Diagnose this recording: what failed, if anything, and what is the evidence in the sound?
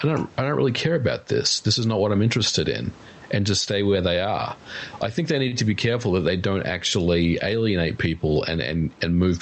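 The gain stage before the call processing is set far too hot, and a fast limiter is likely pulling it back. The result is gain pumping across the whole clip. The room noise sits about 36 dB under the speech, and the gain swings by roughly 15 dB, so the speech sounds squashed. A noise gate would differ: it cuts the background abruptly in pauses rather than raising it there.

The network and jitter-buffer stage has a short stall from a late packet at 5.48 to 5.54 s, between "i think they" and "to be". A packet arrived late, the buffer ran dry, and the receiver stretched the sound already there by about 41 ms, giving a brief held sound. Nothing is skipped, and playback resumes exactly where it stopped, 41 ms behind. That distinguishes it from packet loss, where a piece of audio would be missing or replaced.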